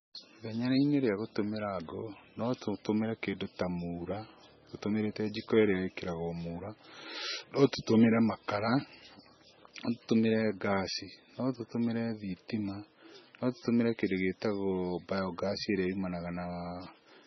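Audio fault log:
Throughout, MP3 compression: nothing reaches above 5.9 kHz, so the speech sounds dull and heavily watery, with swirling, chirpy sibilants and softened consonant attacks. This is likely an MP3 encoder starved of bits, which fits a very low bitrate near 17 kbps; it discards the treble and switches weak frequency lines on and off between frames. A spectrogram shows a flat ceiling at 5.9 kHz and patchy, flickering holes in the upper bands.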